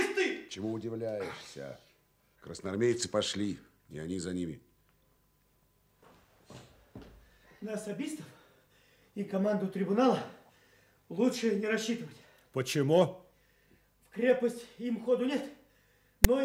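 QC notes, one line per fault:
16.24 s, file tags played as audio. A very short, loud rasp cuts in with hard edges right at the end of the clip. It lasts only a few milliseconds. Text from the file's tag block has been read as if it were sample data. Character bytes cluster in a narrow range of values, so the burst sounds harsh and gritty and sits offset to one side rather than centred. Nothing in the sound leads into it or away from it.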